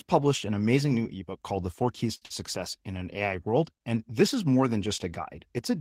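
At 2.15 s a short stall from a late packet begins, lasting until 2.24 s. A packet arrived late and the buffer ran dry. The last sound is held for about 61 ms, then the speech picks up where it stopped. Nothing is lost, but the playback delay grows by 61 ms.

Right after, from 2.26 to 2.32 s, comes a short concealed packet loss. About 80 ms of speech never arrived in time. The receiver covered the gap with 45 ms of continued sound, so a brief smear replaces the missing piece. The delay drops back by about 40 ms.

From 2.79 to 3.04 s there is a jitter buffer slow-down. The receiver repeated small pitch-period chunks to rebuild its reserve, adding 37 ms. The speech runs at 88% speed with unchanged pitch, so sounds in this stretch are slightly drawn out.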